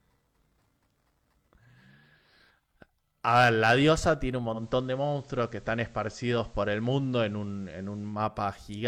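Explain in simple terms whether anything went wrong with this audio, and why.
Two things went wrong. From 3.28 to 4.10 s the voice turns harsh and fuzzy on its louder moments, with a crackly edge. That is hard clipping: the sound was pushed well past the largest level one stage of the recording chain could handle, so the tops of its loudest waves were sliced off flat. Those flat edges create extra high-pitched tones that were never part of the voice, which is the fuzz you hear.

Then, from 4.52 to 8.21 s, a gentle hiss rises behind the voice and the loudness shifts slightly. This is digital radio blending to analogue: the radio lost its digital signal and faded across, over about 0.13 seconds, to the same station's ordinary FM broadcast, then faded back at 8.21 s. FM carries less treble and more background hiss, so the sound goes noisier for that stretch.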